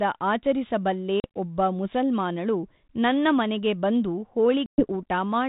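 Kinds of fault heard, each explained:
Packet loss on an ADPCM call: hard-edged silent holes of 40 ms at 1.2 s, before "ಒಬ್ಬ ಮುಸಲ್ಮಾನಳು ನನ್ನ ಮನೆಗೆ", and 120 ms at 4.66 s, after "ಮುಸಲ್ಮಾನಳು ನನ್ನ ಮನೆಗೆ ಬಂದು". Lost packets become silence, and the 32 kbit/s G.726 decoder's predictor and step size drift from the sender's, briefly disturbing the resumed speech.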